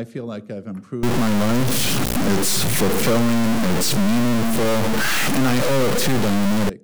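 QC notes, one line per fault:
1.03–6.69 s, stuck bit: harsh, buzzy distortion with noise filling pauses, likely a data bit frozen high or low, its step roughly -15 dBFS, so fairly loud.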